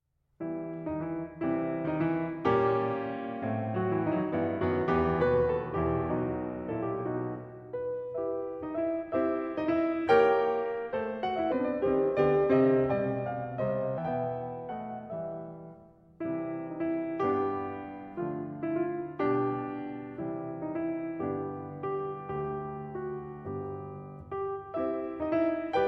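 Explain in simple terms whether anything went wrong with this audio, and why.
A section at the wrong speed runs from 11.52 to 13.98 s. The music there plays at about 0.8 times its proper speed, so it drags and drops roughly four semitones in pitch, likely because that stretch was played back against the wrong clock.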